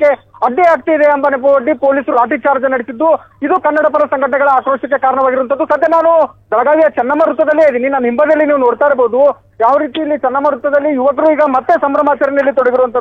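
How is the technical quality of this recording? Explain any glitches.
Two brief dropouts mar the recording, both compressed frames skipped. At 2.09 to 2.12 s and 6.27 to 6.34 s, whole frames of the encoded stream never reach the output, either missing or rejected as corrupt by the decoder, so playback lurches forward. The first jump loses about 100 ms of sound and the second about 50 ms, which fits frames of 46.4 ms. Each join is heard as a sudden jump ahead in the audio.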